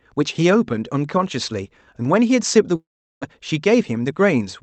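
Long network dropout, 2.75 to 3.24 s: the sound stops and is replaced by a buzzy continuation of the last sound that fades away, leaving near-silence until the speech returns. The likely cause is a stretch where no packets arrived, so the receiver filled the gap by repeating and decaying what it last had. About 0.4 s of the original speech is never heard, and the timing afterwards sits around 70 ms later than before.

Jitter buffer speed-up, 3.83 to 4.13 s: the speech briefly runs about 13% fast while keeping its pitch, giving a hurried feel. With more audio queued than it wanted, the receiver trimmed short pitch-period-sized slices over and over to pull the delay back down, shortening the passage by around 50 ms. Throughout, the call codec's band limit near 8 kHz is audible as missing top-end air.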